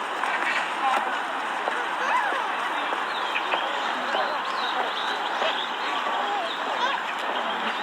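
No audible technical faults present.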